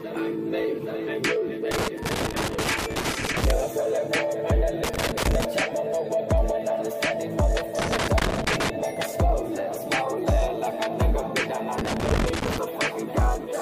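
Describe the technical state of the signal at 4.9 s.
At 4.9 s the signal is hit by loose connector crackle, running from 4.84 to 5.45 s. A worn contact briefly makes and breaks, chopping the audio into an irregular scratchy burst. Unlike evenly spaced digital clicks, the dropouts come in ragged clusters and the signal itself is interrupted.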